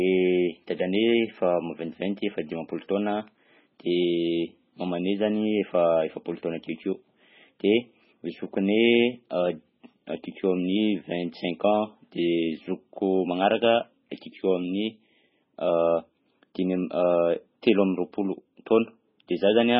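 Throughout, the speech is dull and watery, with nothing above 5.6 kHz. Likely MP3 compression at a starved bitrate, near 16 kbps. Weak frequency lines flicker, and sibilants chirp.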